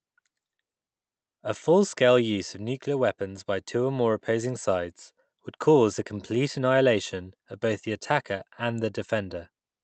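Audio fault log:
Nothing to log here: the speech comes over a normal Opus call path at about 32 kbps, with its top end stopping around 8 kHz as that setting would give, and there are no faults.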